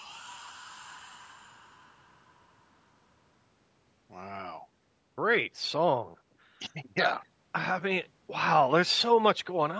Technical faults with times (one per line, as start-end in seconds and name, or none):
none